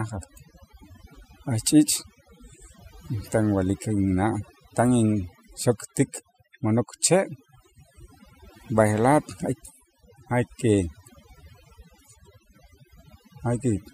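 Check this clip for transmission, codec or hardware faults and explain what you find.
There's overdone noise removal running through the whole speech clip, so the background drops and breaks up into twinkling specks.

Overdone noise removal, throughout: a noise reducer set far too hard is switching off bands near its noise estimate, taking quiet parts of the voice along with them.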